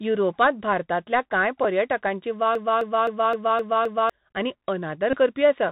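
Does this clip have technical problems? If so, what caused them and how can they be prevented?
Yes. Three kinds of fault are audible.

Bluetooth CVSD headset codec: the link carries the speech as a one-bit-per-sample delta stream, where each bit only says step up or step down and the step size adapts. The result is narrowband, which fits the 64 kbps CVSD headset mode. Nothing above 4 kHz survives, so the speech sounds muffled. A grainy hiss sits under it throughout, s sounds are scratchy, and loud bright moments distort where the step can't keep up. To prevent it, use a headset and phone that negotiate the wideband mSBC or LC3 voice codec, or record through a wired microphone.

Bluetooth headset packet repeated: voice packets on the radio link were lost, and the chip decoded the previous packet again in their place. At 1.64 s about 7.5 ms is replaced, which fits two packets and gives only a brief tick. 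From 5.10 to 5.17 s a longer run of about 26 ms repeats at the packet rate, which fits seven packets, producing a short buzz near 267 Hz. To prevent it, keep the headset close to the phone and away from Wi-Fi and other 2.4 GHz interference.

Broken-record loop: between 2.55 and 4.10 s a 260 ms piece of audio plays six times back to back, exactly the same each time, and the speech that belonged in that span is gone. This is likely a stall in the player, encoder or stream, which kept resending the last fragment it held until fresh data arrived. To prevent it, give the recording or streaming chain enough buffering and CPU headroom, and have it output silence on underrun rather than repeating held data.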